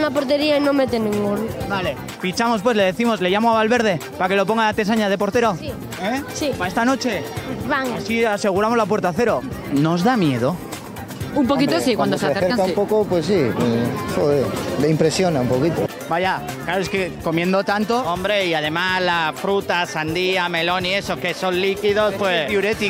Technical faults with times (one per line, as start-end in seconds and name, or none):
none